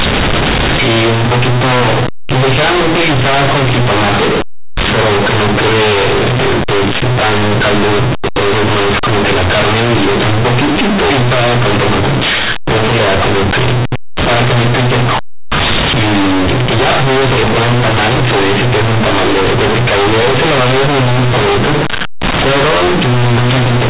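From start to finish, the speech suffers from companded audio read as linear. The bytes were written as A-law but played back as plain 8-bit samples, with no expansion step. Every sign change flips the output across about half its range. Quiet passages come out as large as loud ones, and the waveform is badly bent. The result is very loud, buzzy distortion, with harsh noise filling the pauses. Underneath, the G.711 telephone band still caps everything at 4 kHz.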